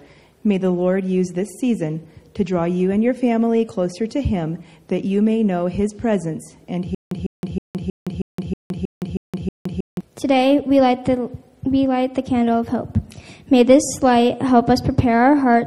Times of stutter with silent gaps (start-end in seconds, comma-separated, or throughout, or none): 6.95-10.01